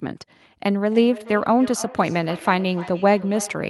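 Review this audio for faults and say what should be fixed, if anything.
From 0.8 s to the end of the clip, the speech carries feedback echo between two devices. A second device in the room replays the call, the microphone picks it up, and the echo canceller, which removes only its own device's playback, passes it on. Copies return roughly every 300 ms, at most about 18 dB below the speech. Room reverberation smears continuously, but these are distinct delayed repeats. Prevent it by letting only one device per room join the call with audio.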